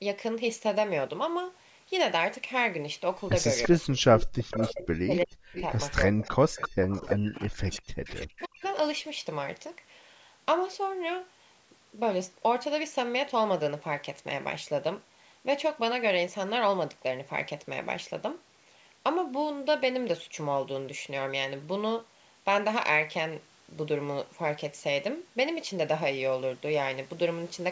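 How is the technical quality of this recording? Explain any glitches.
The recording has two linked problems, both in roughly the span from 3.6 to 8.7 s of this speech clip, which is band-limited to 8 kHz by the call's microphone processing.

Echo leak, at 3.63–3.68, 4.2–4.86, 5.54–5.95, 6.61–7.4 and 7.72–8.69 s: a delayed copy of the speech trails by 332 ms, between about 5 and 20 dB below the speech. The likely cause is a loudspeaker-side echo canceller letting residue through.

Speech suppressed in double talk, at 3.68–4.0, 4.36–5.7 and 6.1–8.63 s: the talker dips sharply, by roughly 40 dB at worst, while both sides overlap. This is likely an echo canceller ducking everything when it cannot separate the talker from the echo.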